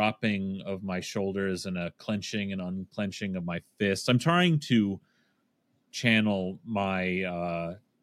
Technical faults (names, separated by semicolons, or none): none